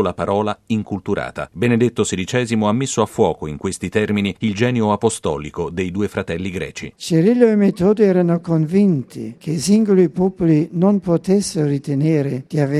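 From 8.91 s to 11.1 s a block size mismatch (truncated) sets in: an upstream stage hands over blocks slightly longer than the next stage accepts, so the tail of each block is discarded. That regular chop shows up as a buzz at about 92 Hz, the block rate. The discarded portion is tiny, so the timing stays at 1.0 times normal speed and the pitch holds. Unlike the padded form, no gaps or slowing are heard.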